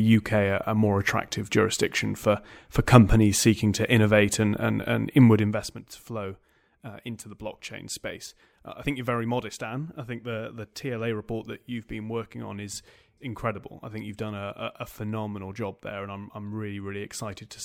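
Speech clip with zipper noise between 5.34 and 5.74 s, after "innovate and and and" and before "to flow uh into". The level falls by roughly 15 dB in coarse unsmoothed increments, around a hundred a second, and each jump adds a small click, producing a fast ticking buzz over the drop.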